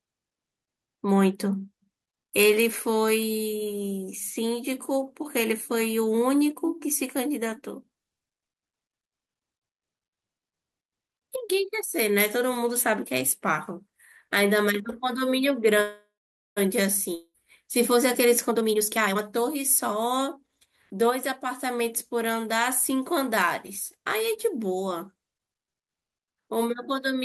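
Speech, with three call-transport faults in quick succession. At 15.81 s a call audio freeze begins. The last sound is stretched into a fading buzz that, for about the final half second, becomes near silence until 16.59 s. Speech then resumes where it stopped, with nothing lost, about 0.75 s later than it should. The likely cause is delayed packets draining the jitter buffer. On a spectrogram this shows as smeared horizontal bands that fade to an empty column, and the waveform thins to a flat line before recovering. From 17.15 s to 17.36 s a long network dropout repeats the pattern more briefly: a decaying buzz of about 0.2 s, with only the last 50 ms or so truly silent. This time roughly 200 ms of speech never returns, so the audio comes back further on and a fragment is simply missing. The likely cause is packets that never arrived. Visually it is a short faded patch followed by an abrupt discontinuity in the formant tracks. 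Then, from 17.90 s to 21.07 s, a jitter buffer speed-up plays the speech at about 123 % of normal rate with unchanged pitch, sounding hurried. The receiver trims many pitch-period-sized slices, about 0.7 s in total, to shed the extra delay it had built up. On a spectrogram, syllables and harmonic patterns look horizontally compressed with pitch lines at the same height. The waveform shows tighter spacing of syllable envelopes over that span.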